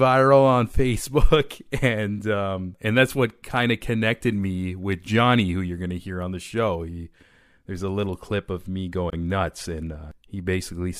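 At 9.10 to 9.13 s there is a gap at a join of encoded pieces. Separately encoded segments were joined untrimmed, leaving a 28 ms break. The speech then resumes where it stopped.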